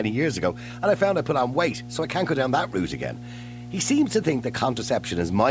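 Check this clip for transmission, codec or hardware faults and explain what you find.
One hardware fault runs through the whole speech clip: mains hum. A steady 60 Hz drone sits roughly 15 dB under the speech, likely from a ground loop or nearby transformer leaking power-line current into the signal path. The call microphone processing, whose band ends at 8 kHz, is working as intended.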